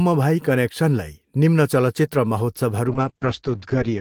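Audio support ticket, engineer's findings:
Call bitrate drop from 2.88 s to clip end. Speech turns coarse and muffled, top band cut near 8 kHz. Encoder starved, consistent with roughly 32 falling to 8 kbps.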